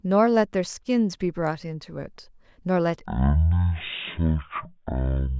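From 3.06 s to the end at 5.39 s, the samples are played back far slower than they were captured, with no rate conversion. The three-to-one ratio fits 48 kHz audio played at 16 kHz. This wrong sample rate slows the speech to a third of its speed and drops its pitch by 19 semitones together, so the voice turns deep and dragging.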